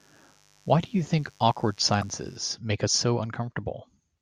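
From 0.0 to 2.37 s, a steady, raspy mains buzz sits under the speech, about 35 dB down. Sharp spikes twice in every 50 Hz cycle spread harmonics upward. At 2.01 s, a 26 ms jump produces a brief glitch, likely from a broken MP3 bit reservoir. A cut frame left the next one reading wrong bytes.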